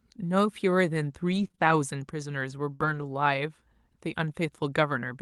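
From 1.31 s to 3.04 s the speech shows scattered short gaps. Around four small holes fall across this stretch, where audio arrived late or never arrived. About 120 ms is missing in total. The receiver covered the holes by stretching the last sound forward, with about 260 ms rebuilt. The longest gap is roughly 70 ms. Each one is heard as a brief tick, smear or hiccup. The call path's top end stops near 12 kHz.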